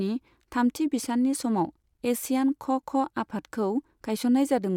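No technical faults can be heard anywhere in this speech recording.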